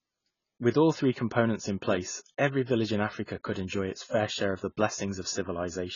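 Speech, with heavy AAC compression damage across the whole clip. Nothing is present above 7 kHz, and the remaining band sounds dull and smeared. The lowered cut-off and coarse spectral quantisation likely come from AAC-LC running at a very low bitrate, consistent with around 16 kbps.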